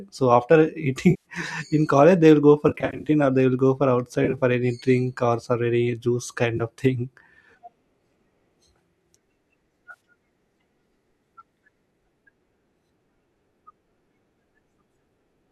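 Speech carrying brief smeared, noisy and phasey patches at 1.10 s (about 150 ms, just before "in college they"), 2.69 to 3.10 s (scattered gaps after "go for"), 4.25 to 4.42 s, 6.57 s (before "of thing") and 9.91 s. This is AAC frame loss with concealment: the decoder rebuilds missing frames from the last good spectrum of what is likely low-delay AAC compression.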